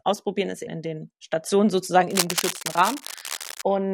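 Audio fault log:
2.10–3.62 s cable scratch noise: dense, uneven scratching bursts sit only a little below the speech, likely from a worn cable or connector being moved, its contact resistance changing rapidly.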